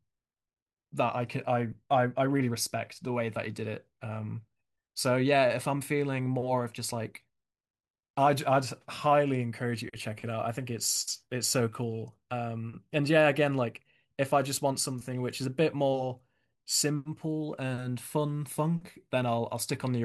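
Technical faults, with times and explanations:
No technical faults detected.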